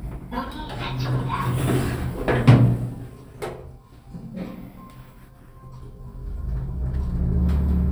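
Listening through the recording, nothing stood out as a technical problem at any point.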